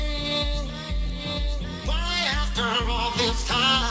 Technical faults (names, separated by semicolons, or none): aliasing